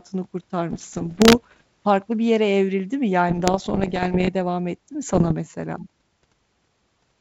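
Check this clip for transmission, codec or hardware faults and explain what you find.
The clip has one kind of fault, bit errors on an ADPCM link, in three bursts: 0.72 to 1.62 s, ending just before "farklı bir yere evrildi"; 3.29 to 4.29 s, between "bir yere evrildi mi" and "devam etti mi"; and 5.08 to 5.34 s, right after "devam etti mi". Flipped bits corrupt the decoder's step size and predictor, so each error rings on as pops and rough, grainy bursts with brief jumps in level. The density suggests an error rate of around 1 percent, a little higher in the last burst. Unlike packet loss, the sound is never silenced or smoothly concealed. It is distorted in place. The wideband G.722 coding underneath, which fits 64 kbit/s, keeps the speech bright between these bursts.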